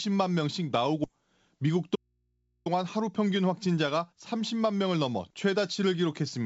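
Skip ahead at 1.04 to 1.06 s: roughly 0.4 s of speech was dropped, so playback jumps forward and the two sides are butted together with no gap. Jitter buffer speed-up from 1.14 to 4.53 s: the receiver trimmed short pitch-period slices to shed about a fifth of a second of backlog, so speech runs at 107% and sounds hurried at unchanged pitch. Audio dropout to a faint residue from 1.96 to 2.66 s: the speech cuts out abruptly for 0.70 s, leaving only mains hum about 45 dB below the signal, likely from an input left open after the wanted signal was lost. Throughout, the G.722 call path leaves nothing above 8 kHz.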